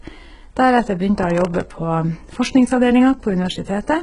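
Throughout the speech, s sounds turn gritty and lispy, the treble sounds synthetic, and nothing reaches above 11 kHz. This is likely HE-AAC compression at a very low bitrate, with the upper band rebuilt from copied lower bands, so its harmonics fail to line up with those below.

From 1.23 to 1.63 s a burst of gritty tearing crackle rides over the speech, then stops. This is processor overload crackle: about ten very short buffers missed their deadlines, each replaced by a hard-edged fragment of old audio.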